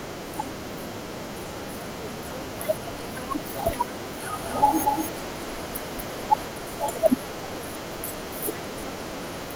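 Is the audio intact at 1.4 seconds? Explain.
Yes, the speech at 1.4 seconds is intact, with no audible dropout, click, distortion or other fault at that moment.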